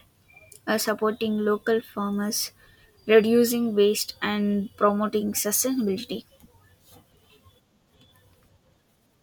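Nothing technical stands out in this speech recording; it just runs along without any audible trouble.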